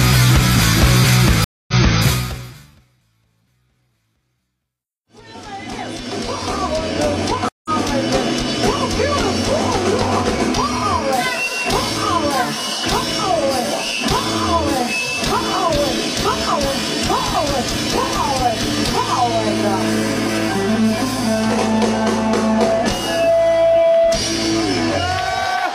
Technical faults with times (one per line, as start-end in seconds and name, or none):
1.44-2.01 stream reconnect
7.49-7.70 stream reconnect